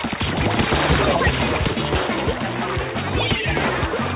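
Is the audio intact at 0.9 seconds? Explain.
Yes, the audio is intact at 0.9 seconds, with nothing there beyond the narrowband call-codec sound that carries nothing above 4 kHz.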